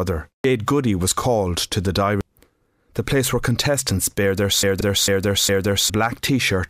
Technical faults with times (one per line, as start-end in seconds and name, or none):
0.44 damaged data in a compressed stream
2.21 damaged data in a compressed stream
4.63-5.90 broken-record loop
4.81 damaged data in a compressed stream